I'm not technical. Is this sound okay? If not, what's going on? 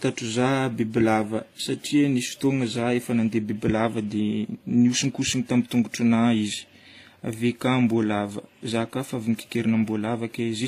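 No. Throughout the speech there is a mixed, compressed quality, and nothing sounds above about 14.9 kHz, so the top sparkle is gone. This is likely transcoding between lossy codecs: the audio was squeezed by one compression format, with traces that fit HE-AAC, then squeezed again by another, with traces that fit WMA. Unlike a single poor encoding, two different kinds of blur sit on top of each other instead of one consistent dullness.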